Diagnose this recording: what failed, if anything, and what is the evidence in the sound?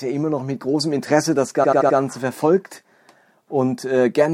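The fault sits at the codec or storage stage: repeated frames. From 1.63 s to 1.97 s the same 76 ms block of speech plays four extra times, a stutter adding about 0.34 s to the clip. The block length points to a short run of compressed frames being written or decoded again. Unlike packet-loss concealment, the repeats are exact copies and nothing is missing.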